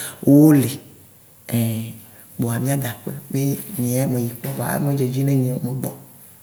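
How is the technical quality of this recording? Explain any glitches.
No glitches are audible anywhere in the recording, and the signal stays continuous and steady throughout.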